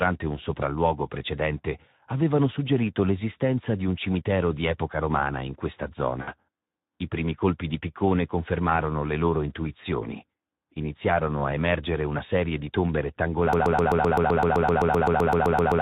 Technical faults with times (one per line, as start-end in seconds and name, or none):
0.00-15.81 Speex codec
6.21-6.34 VoIP packet loss concealed by the speech codec
13.53-15.81 broken-record loop